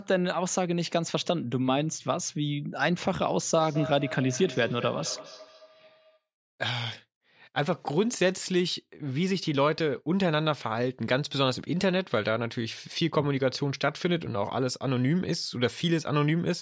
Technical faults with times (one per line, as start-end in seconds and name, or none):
3.57-6.25 feedback echo between two devices